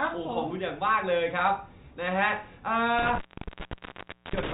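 A loose cable or plug in this speech recording's chain makes an intermittent contact fault: the trouble runs from 2.99 s to 4.53 s, with the connection open for about 1.14 s in that span. While the line is open the speech drops out or breaks up, with a crackle at the edges of the break and only faint hiss underneath. The band-limited sound of G.711 telephone coding can be heard around the dropout, where the signal is still passing.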